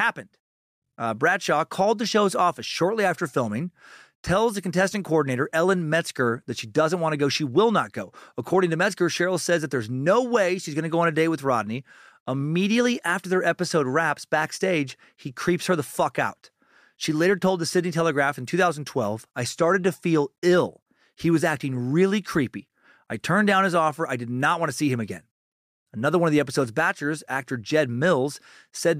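From 13.44 to 15.46 s, crude rate conversion (48 to 44.1 kHz, linear interpolation) adds a gritty, inharmonic fizz, seen as faint stray streaks on a spectrogram.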